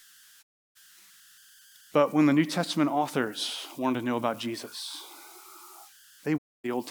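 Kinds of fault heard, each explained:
converter idle tones: A delta-sigma converter running without dither settles into repeating bit patterns on small inputs, and those patterns produce a tone. Here a whistle near 1.5 kHz sits about 28 dB below the speech for the whole clip. Unlike mains hum or a fixed interference whistle, its pitch comes from the converter's own input offset rather than anything external, and it is a converter artefact rather than a pickup from outside.
digital broadcast dropout: The receiver lost valid frames and muted until clean data returned. The sound fades out over about 20 ms and goes silent from 0.41 to 0.77 s and again from 6.36 to 6.66 s. The gaps, about 320 ms and 256 ms, fit whole frames of roughly 32 ms being discarded. Unlike a concealed packet loss, nothing is filled in. The speech simply vanishes and resumes later, with what was sent in between lost.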